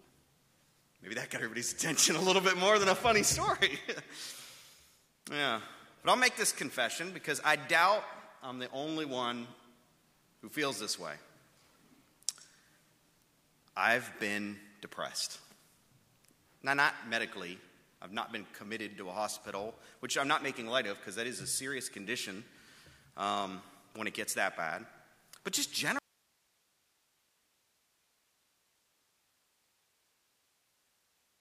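At 25.99 s the sound cuts out abruptly and never returns. Only faint hiss remains, roughly 40 dB down. This audio dropout to a faint residue likely reflects a lost signal feeding a still-live path.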